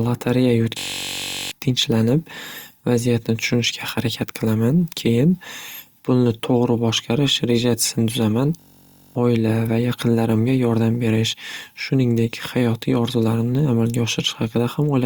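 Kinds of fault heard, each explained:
System hang loop: playback froze while one 21 ms buffer repeated. Each freeze makes a steady 47 Hz buzz, twice in this speech.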